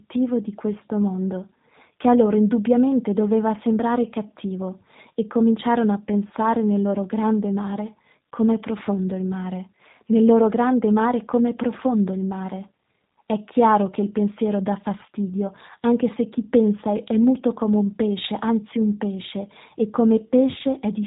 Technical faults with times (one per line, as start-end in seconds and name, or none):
0.00-21.07 G.729 codec